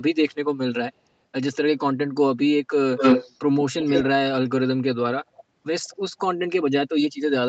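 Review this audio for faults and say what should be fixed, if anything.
Echo leak at 2.97–3.39 s, 3.80–4.04 s, 5.35–5.43 s and 5.84–5.96 s. A delayed copy of one voice returns about 181 ms late. The first is louder than the speech and the second about as loud. The last two are far quieter. The likely cause is a loudspeaker at one end whose echo canceller let its microphone pickup through. Prevent it by having that side use a headset or by tuning its echo canceller.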